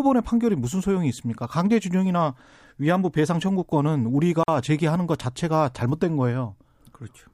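At 4.43 s the speech breaks off for about 47 ms, a gap at a join of encoded pieces: separately encoded segments were butted together with their encoder delay and end padding left in. Unlike a dropout, nothing is lost; the speech resumes exactly where it broke, with softened edges.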